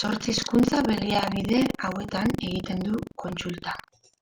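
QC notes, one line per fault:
Throughout, buffer tearing: the writing program and the playback hardware have drifted out of step around the ring buffer, so their positions cross inside each period. A small slice of every buffer, around 15 percent, still holds speech from a lap earlier, roughly a tenth of a second old, spliced in with hard edges on both sides. The result is a robotic rattle at 23.4 Hz, which fits a 2048-sample buffer, heard whenever speech is present.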